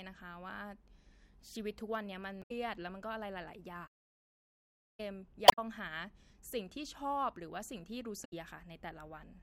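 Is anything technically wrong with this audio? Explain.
Yes. At 2.39–2.51 s, 5.45–5.59 s and 8.21–8.33 s the speech briefly breaks up. This is damaged data in a compressed stream: the decoder misreads corrupted frames and resyncs further on. From 3.87 to 5.00 s the speech falls silent for about 1.1 s, then resumes, likely a playback stall where the player ran short of data.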